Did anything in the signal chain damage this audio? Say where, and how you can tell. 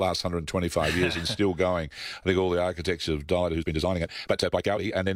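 Yes. A time-stretched section from 3.38 s to the end was likely introduced by length-fitting software at the editing or playback stage, which sped the speech up about 1.79 times by discarding short slices while holding pitch, so the pace jumps abruptly and sounds rushed.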